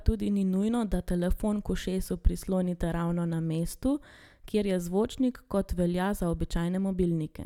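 No technical faults can be heard anywhere in this recording.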